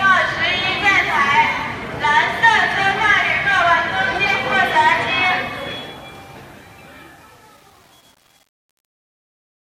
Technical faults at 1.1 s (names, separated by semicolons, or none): none